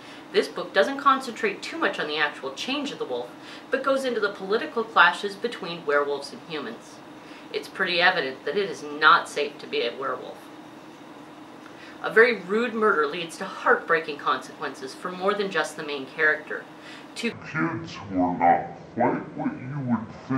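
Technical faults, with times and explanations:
17.32–20.37 s, section at the wrong speed: from 17.32 s to the end, the audio runs at about 0.55 times its proper speed, so everything is stretched to nearly twice its length and drops roughly ten semitones, close to an octave. Because tempo and pitch fall together at one instant, the sound abruptly turns deep and sluggish. The likely cause is that this final stretch was played back against the wrong clock.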